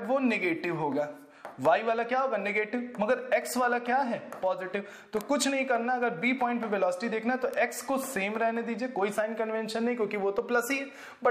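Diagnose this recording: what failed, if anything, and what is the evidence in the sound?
Bit error spikes in storage or a digital link: single-sample ticks at 5.21 s (about -11 dBFS) and 7.54 s (about -17 dBFS), broadband and unrelated to the audio, with no gap like a dropout.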